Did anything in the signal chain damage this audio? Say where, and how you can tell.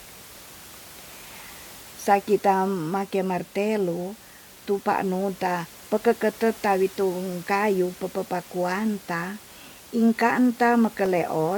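No, the signal chain left this speech recording intact, and the only steady background is the room's own noise, sitting about 22 dB below the speech, which the microphone picked up in the space rather than anything the equipment introduced.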